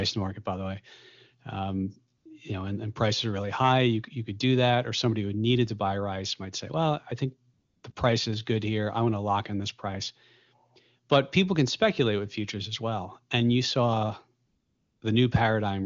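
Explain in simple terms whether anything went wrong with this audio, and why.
Yes, AMR comfort noise. At 2.17 to 2.25, 7.53 to 7.83, 7.91 to 7.95 and 14.45 to 15.01 s, the phone treated pauses as silence and filled them with smooth, steady fake hiss. Unlike a dropout, these gaps aren't dead quiet; the background just turns uniform.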